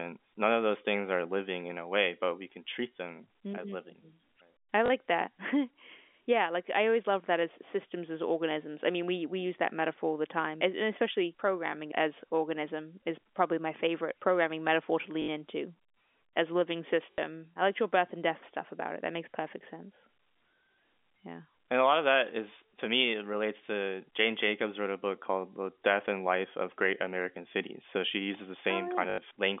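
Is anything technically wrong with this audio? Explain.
Yes. The speech has four short robotic stutters. Each is a buzzing repeat: at 4.86 to 4.90 s (40 ms), at 15.22 to 15.28 s just after "favorite programming metaphor to" (60 ms), at 17.12 to 17.18 s between "as living" and "I liked your birth" (60 ms), and at 29.10 to 29.18 s after "she uses the" (80 ms). This is packet loss with the last packet repeated. When audio packets went missing, the receiver replayed the most recent one until fresh data arrived. The loop ignores the pitch cycle, and the repeats form a 50 Hz buzz, which fits 20 ms packets. The G.711 telephone coding carrying the call gives its usual narrow line band of roughly 250 Hz to 3.5 kHz.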